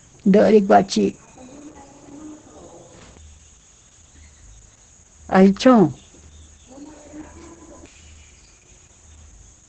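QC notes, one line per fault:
Throughout, Opus voice compression: heavy SILK coding at a low bitrate, likely around 10 kbps, leaves the speech muffled and hoarse, with nothing above roughly 8.8 kHz.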